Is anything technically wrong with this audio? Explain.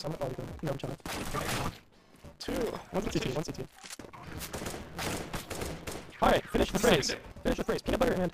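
Yes. A block size mismatch (truncated) runs through the whole clip. One stage writes blocks longer than the next stage reads, so the tail of each block is dropped. The buzz sits at 172 Hz, which fits a 256-sample read block. Cutting away part of every block makes the audio play about 1.88 times faster than it should. The pitch stays near normal, because each surviving piece still plays at the right rate.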